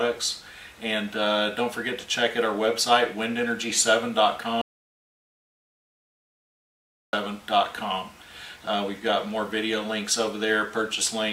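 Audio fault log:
4.61–7.13 s, audio dropout to silence: the sound cuts off mid-flow and the clip goes fully silent for about 2.52 s, with no room tone or background underneath, then resumes abruptly at 7.13 s. The silence is clean rather than degraded, so the cause is likely a lost input upstream, such as a disconnected device, a failed link or a stray mute, while recording continued and wrote silence. Whatever occurred during the gap is not recoverable.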